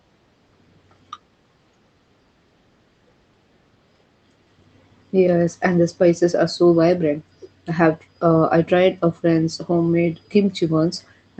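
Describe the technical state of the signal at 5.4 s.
At 5.4 s the speech is intact, with no dropout, glitch or distortion beyond the ordinary band-limited sound of the call path it travels through.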